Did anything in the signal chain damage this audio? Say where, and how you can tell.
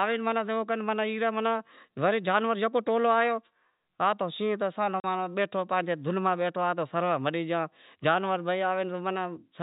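Yes, at the network stage. At 5.0 s the speech drops out for 40 ms, to 5.04 s, with hard edges on both sides. That's packet loss filled with silence: the receiver never got those packets and just played silence in the gap instead of concealing it. A 40 ms hole fits two 20 ms packets going missing back to back. The G.711 telephone coding shows up only as the usual ceiling at 4 kHz.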